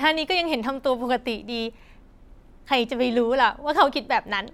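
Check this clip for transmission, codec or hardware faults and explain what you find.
No transmission, codec or hardware faults.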